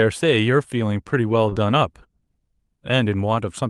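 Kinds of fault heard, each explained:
Short concealed packet loss: Around 1.49 to 1.53 s, roughly 20 ms of the speech never arrived in time. The decoder papered over the hole by stretching the sound just before it and then easing back into the real signal, so you get a quick smeared blip rather than a clean gap. It's brief enough to pass as a tiny wobble in the voice, riding on a call path whose top end stops near 12 kHz.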